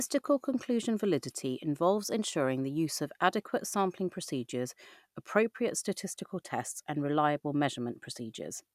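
Speech with no audible faults.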